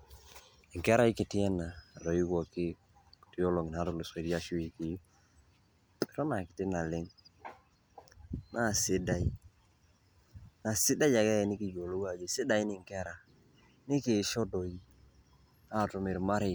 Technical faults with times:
none

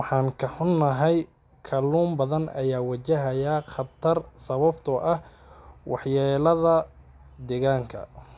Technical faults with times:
none

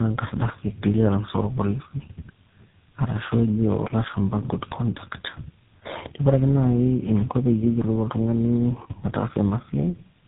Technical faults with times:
0.00-10.28 tandem speech coding

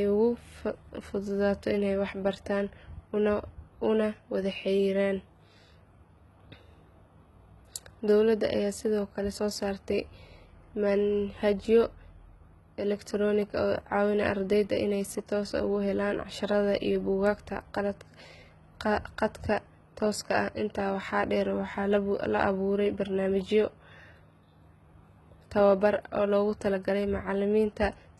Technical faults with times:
0.00-28.20 HE-AAC compression

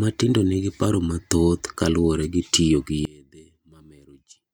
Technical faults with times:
3.05-4.54 one channel inverted

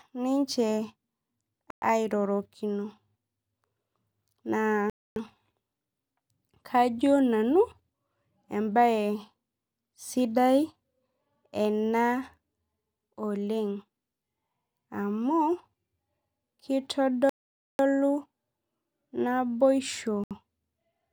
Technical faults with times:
1.70-1.82 Bluetooth stall
4.90-5.16 Bluetooth stall
17.29-17.79 Bluetooth stall
20.24-20.31 Bluetooth stall

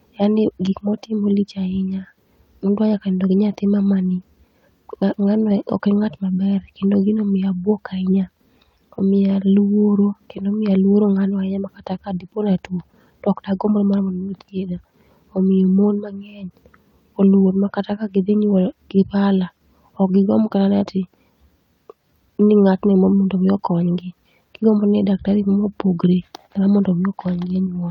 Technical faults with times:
none

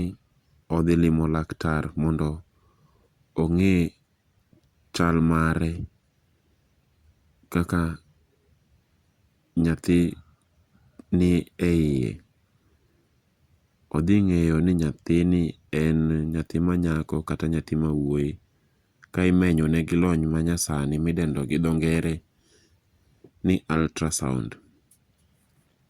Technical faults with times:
none

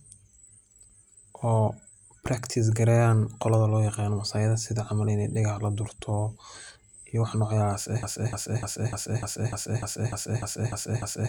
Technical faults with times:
8.03-11.29 broken-record loop

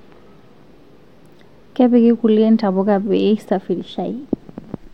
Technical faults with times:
none

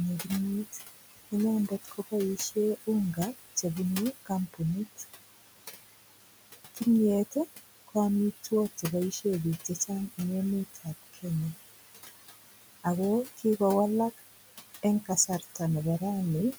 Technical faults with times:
0.00-16.58 noise suppressor artifacts
0.24-5.04 speech cut by the noise suppressor
6.75-10.19 speech cut by the noise suppressor
10.74-11.55 speech cut by the noise suppressor
12.84-13.60 speech cut by the noise suppressor
14.83-16.55 speech cut by the noise suppressor

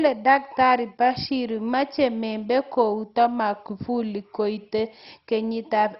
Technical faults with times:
0.00-5.99 MP2 compression

